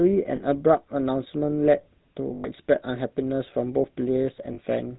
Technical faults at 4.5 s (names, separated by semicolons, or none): GSM full-rate codec; lost GSM frames